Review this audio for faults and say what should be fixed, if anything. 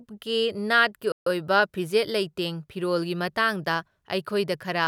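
A playback stall runs from 1.12 to 1.27 s: the speech cuts to silence in mid-flow for about 143 ms and then resumes. The likely cause is the player running short of data or its audio thread being blocked, so the output had nothing to render until the buffer refilled. To prevent it, keep a deeper playback buffer and keep the audio thread free of blocking work.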